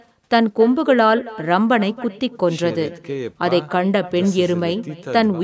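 Echo with no canceller runs through the whole speech recording: the far end's loudspeaker feeds its microphone, returning each phrase roughly 300 ms later, about 17 dB quieter and thin, within call-band audio reaching 8 kHz.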